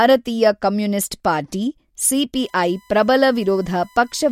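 From 2.35 s to the end, a steady 1 kHz whine sits about 35 dB below the speech: USB whine, from 1 ms bus frames leaking through power or ground.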